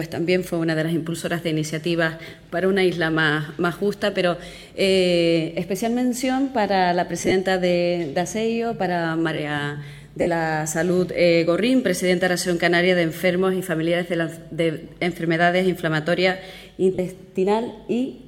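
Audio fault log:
7.18–7.32 s, 10.21–10.27 s, 16.95–16.99 s: lost LE Audio frames. The decoder refills gaps of about 60 ms (scattered), 52.5 ms and 37.5 ms with sign-randomised repeated spectrum, producing brief noisy smears.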